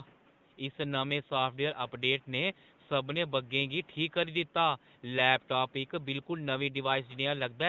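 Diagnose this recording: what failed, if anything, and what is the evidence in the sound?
No fault found in this recording.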